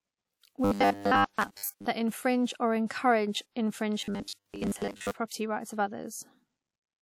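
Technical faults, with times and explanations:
0.65–1.86 s and 4.01–5.11 s, robotic sound from repeated short buffers: in both stretches, ending just before "that infringe or" and "property rights of", the speech turns into a rigid, metallic buzz at 100 Hz that only loosely tracks the original. This is likely a playback path starved of new audio, looping roughly 10 ms segments while most of the real signal is skipped.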